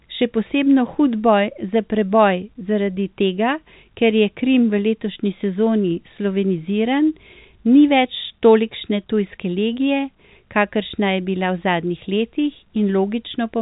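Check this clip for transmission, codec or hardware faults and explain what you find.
Nothing wrong can be heard in this recording.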